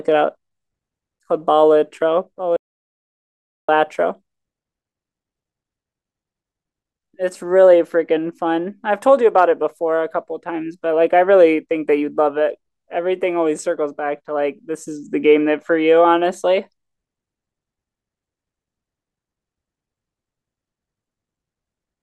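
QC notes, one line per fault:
2.57–3.69 s, audio dropout to silence: the input feed was likely lost while recording continued, writing silence. The speech cuts off abruptly and resumes mid-flow after 1.12 s of total silence, with no room tone, and that stretch is gone.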